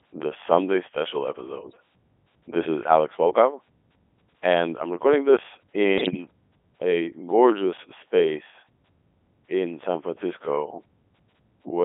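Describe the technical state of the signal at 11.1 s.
At 11.1 s the speech is still passing through the Codec 2 vocoder that colours the whole clip. The decoder rebuilds each voiced stretch from sine waves using only pitch, voicing, energy and a coarse spectral envelope, so the original waveform is discarded, and the heavy damage fits a 3.2 kbit/s mode. The speech sounds robotic and buzzy. On a spectrogram, energy stops below 300 Hz and above 3.5 kHz, with smeared, evenly spaced harmonic lines and no fine noise texture. The waveform has a regular, synthetic periodicity.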